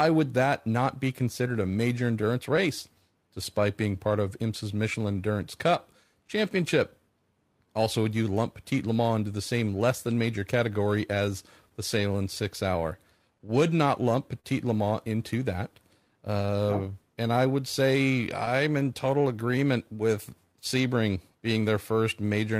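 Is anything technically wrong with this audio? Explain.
Yes, there are a few timing problems in this speech.

Clock drift between sender and receiver runs the whole way through. The sender's clock is running around 3 percent slow, so the receiver keeps having to compensate.

There's also periodic clock jitter throughout, at around 1 kHz. It puts sidebands around every component of the voice, giving a rough, metallic edge that goes away in the pauses.

Repeated timing corrections run from 0.10 to 22.57 s, playing at 98% speed. The receiver keeps repeating small slices to stay in step, adding about half a second overall, which is heard, if at all, as faint hiccups.

Scattered short gaps appear between 6.28 and 18.83 s, about ten of them, the longest around 40 ms. Each was patched by extending the previous sound, leaving brief ticks or smears.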